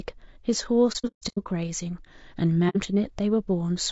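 Throughout, the speech is rough and grainy, with noise filling the gaps between harmonics. This is likely low-delay AAC compression (AAC-ELD), and the damage fits a bitrate around 32 kbps.

From 0.92 to 1.47 s, AAC frame loss with muting cuts soft-edged holes totalling 360 ms, the longest around 150 ms. The decoder zeroes the missing frames, and the overlapping windows fade the sound out and back in. A shorter 60 ms hole follows at 2.69 to 2.77 s.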